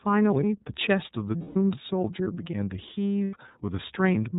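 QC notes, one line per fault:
Throughout: iLBC codec. The speech is confined to narrowband, with nothing above 4 kHz, and has a plainly audible rough, slightly synthetic grain. That fits 30 ms frames at about 13.3 kbps. Unlike generic low-pass filtering, the coarseness lives in the coded excitation itself, not just missing treble.
1.38–1.56 s and 3.25–3.36 s: lost iLBC frames. The speech gives way to a held, faintly buzzy vowel-like tone. Over the 180 ms gap it thins and fades, and the 90 ms gap is shorter. The decoder is repeating the last pitch cycle blended with noise. Each frame decodes independently, so the speech snaps back cleanly at once rather than smearing or recovering slowly.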